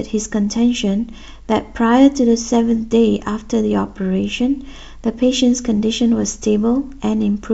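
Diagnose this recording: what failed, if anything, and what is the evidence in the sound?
Nothing has failed: the speech shows no audible defect at any stage of the chain, from capture through playback.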